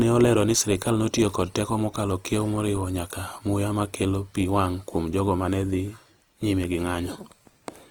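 Throughout, the speech sounds grainy and rough, consistent with Opus compression, likely in CELT mode at a low bitrate near 24 kbps, with starved bands noise-filled.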